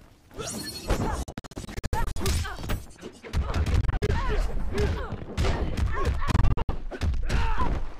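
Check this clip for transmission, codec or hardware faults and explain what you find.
Two faults are present: three bursts of Bluetooth dropout and a wrongly applied de-emphasis over the second two-thirds of the clip.

Bluetooth dropout at 1.23 to 2.18 s, 3.81 to 4.11 s and 6.32 to 6.71 s. The audio is repeatedly chopped into short silent holes. The likely cause is wireless packets arriving too late at the headphones and being discarded. Playback then carries on as though the missing audio had played. In the first burst, about 441 ms goes missing across 0.93 s, in holes of up to 70 ms. The second loses about 139 ms across 0.28 s, with holes of up to 46 ms. The third loses about 209 ms across 0.37 s, again with holes of up to 70 ms.

De-emphasis applied wrongly from 2.67 s to the end. A treble-cut filter meant to reverse pre-emphasis has been applied either to audio that never had that boost or a second time. 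The result is a smooth downward tilt in level toward the high frequencies. At 10 kHz the level sits about 14 dB below the 1 kHz level. From that point on, the sound turns dull and muffled, losing its crispness and air.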